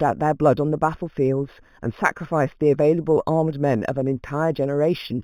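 Throughout the speech there is imaging from linear upsampling, which fits 8 kHz material raised to 44.1 kHz by straight-line interpolation. The top is dulled, and a mirrored copy sits between 4 kHz and 8 kHz, roughly 35 dB down, adding faint metallic shimmer to sibilants.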